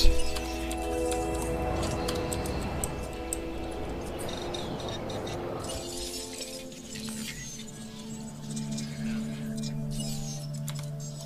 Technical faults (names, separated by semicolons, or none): none